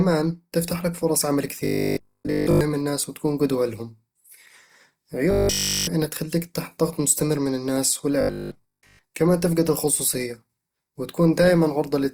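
Throughout, the speech sounds grainy and rough with a noisy texture on tones, the signature of likely Opus compression in music mode at a low bitrate around 24 kbps. From 1.65 to 2.61 s, between "تفتح لك فرص عمل" and "الناس وتكون قدوة لهم", a rigid metallic buzz at 50 Hz replaces the audio. This is robotic sound from repeated short buffers, likely caused by 20 ms chunks being replayed while the real audio is skipped. The same buzz returns from 5.31 to 5.87 s before "انها تخليك تحت ضغط", and from 8.21 to 8.99 s between "ضغط مستمر من الناس" and "كمان تفقد الخصوصية", where most rather than all of the stretch is repeated.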